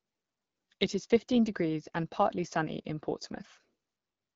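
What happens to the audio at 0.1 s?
Nothing goes wrong at 0.1 s: the speech passes intact through the AMR wideband (HD Voice) codec at 12.65 kbit/s, with no dropout, click or distortion at that moment.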